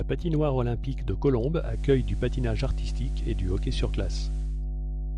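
Mains hum at 50 Hz runs through the whole recording, sitting roughly as loud as the speech itself. Power-line current is leaking into the signal path, most plausibly through a ground loop or a transformer close to the equipment, leaving a steady low drone with a few low harmonics underneath every syllable. At this level it competes directly with the voice rather than lurking in the background.

Just after "patinoire olympique de", at 1.54 s, digital radio blending to analogue sets in: the receiver loses its digital stream and cross-fades over about 0.27 s to the station's FM broadcast, returning to digital at 4.65 s. During the FM stretch the level shifts by about 2 dB, and a faint hiss rises well below the speech.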